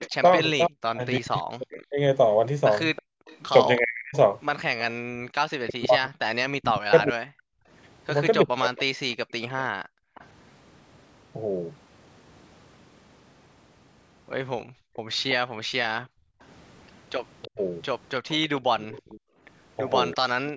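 From 0.0 to 9.2 s the speech repeatedly dips deeply and thins or cuts out in pieces, about four seconds in all. This is speech suppressed in double talk: with both sides talking, the echo canceller likely could not tell this talker from loudspeaker echo and turned both down.

Overlapping this, from 0.02 to 4.8 s, a faint copy of the speech trails it by 329 ms, well below the original. This is echo leak, likely from a loudspeaker on the far end whose canceller let part of the microphone pickup through and sent it back. The same 329 ms echo returns from 9.1 to 10.26 s, quieter still. Inside that stretch, from 9.77 to 10.15 s, the room sound drops out by about 40 dB. This is background gated by the echo canceller, which clamped the microphone hard while the loudspeaker played.

From 14.63 to 20.15 s the faint 329 ms echo leak comes back. Between 14.65 and 19.4 s the background again dips by about 40 dB, around a second in total. 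From 17.48 s to the end, the speech also briefly dips deeply as double-talk suppression recurs.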